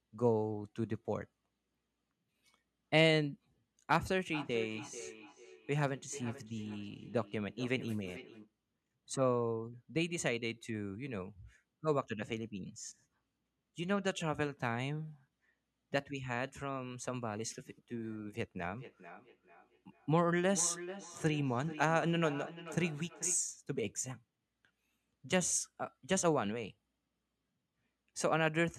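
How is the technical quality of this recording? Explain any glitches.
The speech is marred twice by feedback echo between two devices, from 4.22 to 8.55 s and from 18.74 to 23.47 s. A second device in the room replays the call into a microphone whose echo canceller ignores that playback, so words return roughly every 0.4 s, thinner and ringing, peaking about 13 to 14 dB below the speech.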